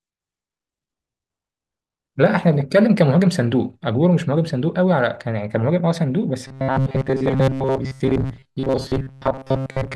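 From about 6.47 s to the end at 9.95 s, the speech goes robotic: a rigid metallic buzz near 133 Hz sits over it, which fits a chunk of about 7.5 ms being replayed. Most of that stretch is repeats, likely from starved buffers.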